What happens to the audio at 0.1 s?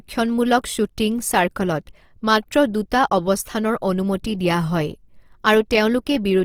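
At 0.1 s, as throughout, the speech sounds grainy and rough. Likely cause: Opus compression in music mode, filling starved bands with noise at a low bitrate near 24 kbps.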